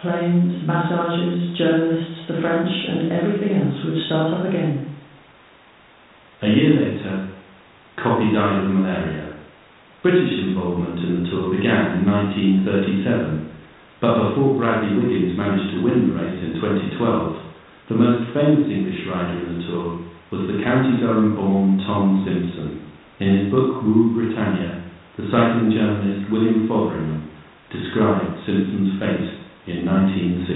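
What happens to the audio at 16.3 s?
Nothing goes wrong at 16.3 s: the speech passes through intact at that moment, heard through a 32 kbit/s G.726 ADPCM telephone path.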